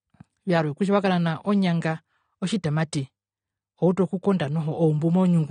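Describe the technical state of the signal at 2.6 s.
At 2.6 s you're hearing AAC compression, and it runs through the whole clip, not just that moment. The speech sounds dull and smeared, with nothing above about 9.7 kHz and a fizzy, warbly edge on the sibilants. That fits a low-bitrate encode around 32 kbps, likely AAC-LC: the encoder quantises each frame's frequency lines hard against a hearing model, cutting off the top and leaving gaps it can't properly fill.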